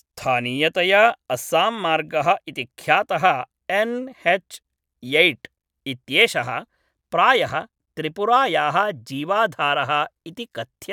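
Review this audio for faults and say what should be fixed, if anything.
No faults turn up in this audio, so nothing needs to be fixed.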